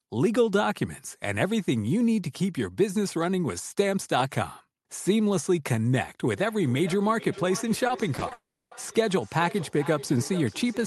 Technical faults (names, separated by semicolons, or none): feedback echo between two devices; repeated packet loss (robotic sound); long network dropout